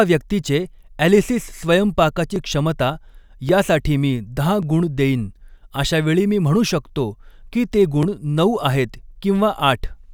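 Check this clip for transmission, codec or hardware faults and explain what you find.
One fault is present: clock drift buffer slips. From 1.23 s to 9.16 s the speech carries a short click at a steady interval of 1.13 s, about seven in all. The likely cause is two devices running on independent clocks that disagree by around a tenth of a percent. The buffer between them slowly drifts until it overflows or runs dry, and a block of a few tens of samples is dropped or repeated, which produces each click.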